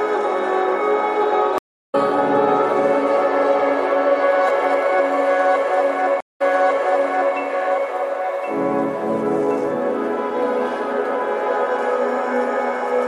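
The stream connection dropped twice, and each time the player reconnected and restarted its decoder mid-stream. This is a stream reconnect. At 1.58 to 1.95 s the audio goes silent for 338 ms, then resumes with a fade-in roughly 0.3 s further on, so a stretch is skipped. At 6.20 to 7.35 s a 182 ms silence is followed by a restart 0.97 s earlier, as the server resent a burst, so that section repeats.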